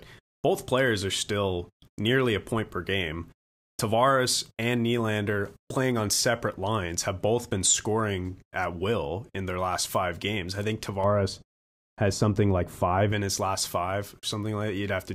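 From 11.04 s to 13.12 s, right after "five games I think" and until "in his last five", the speech turns dull and muffled because de-emphasis was applied wrongly: a treble cut meant to undo pre-emphasis landed on audio that didn't need it. The top end falls away gradually, about 11 dB down at 10 kHz relative to 1 kHz. That smooth slope, with no abrupt edge, distinguishes it from a low-pass filter's sharp cutoff.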